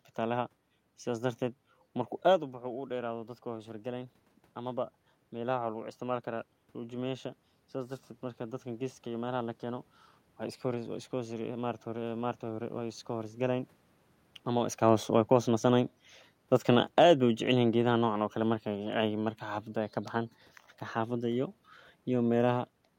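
At about 2 s the talker draws back from the microphone and the level drops by about 9 dB. From 2.6 s to 13.37 s the automatic gain control responds by rising: it judges the input too quiet and lifts its gain by about 8 dB, slowly, across roughly eleven seconds. The speech creeps back up in loudness, and the room noise swells with it, so the background becomes steadily more prominent as the correction proceeds.

Around 14.5 s the talker moves again. From 14.82 s to 19.34 s the automatic gain control falls, backing its gain off by about 5 dB. The speech sinks over those four and a half seconds, and the room noise drops in step with it. Because gain alone is changing, voice and background fade together.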